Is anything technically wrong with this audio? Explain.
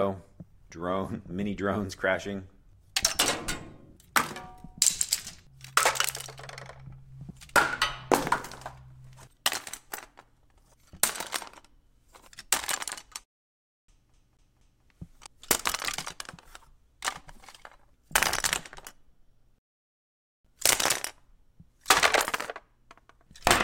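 Yes, there are three faults of two kinds.

A rebuffering stall occurs from 13.24 to 13.88 s and again from 19.58 to 20.45 s. Playback ran out of downloaded audio, so the sound drops to silence for about 0.65 s and then 0.86 s, then resumes exactly where it stopped. Nothing is lost, but the timeline stretches.

A CD stuck on one turn runs from 14.13 to 14.84 s. A disc defect throws the laser back to the same spot on each rotation, so a 0.24 s fragment plays three times, with a brief mute at every jump. This produces a rapid, evenly spaced stutter.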